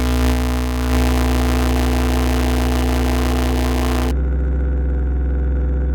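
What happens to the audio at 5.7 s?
Nothing goes wrong at 5.7 s; the audio plays through that moment intact, with no dropout, click or distortion.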